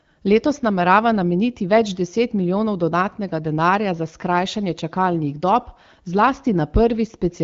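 Nothing's wrong here: it's a speech clip carried over the AMR wideband (HD Voice) codec, with the light coding character and the top end stopping around 7.4 kHz that you'd expect from a call at roughly 12.65 kbit/s.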